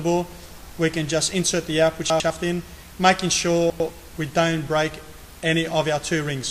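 The audio has two brief jumbled moments caused by chunks out of order, at 2.1 to 2.3 s and again at 3.7 to 3.9 s. In each, a block of roughly 100 ms plays one position late, after the block that should follow it. No audio is missing, but the sequence is scrambled and the swap leaves three hard joins around a short garbled stretch. This points to late-arriving buffers being written in arrival order rather than timestamp order.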